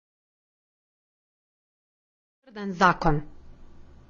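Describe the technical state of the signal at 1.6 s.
At 1.6 s you're hearing the AAC compression that runs through the whole clip. Everything above 7.1 kHz is gone, so the speech sounds dull and smeared, with a fizzy warble on sibilants. That's likely a low-bitrate AAC-LC encode, around 24 kbps.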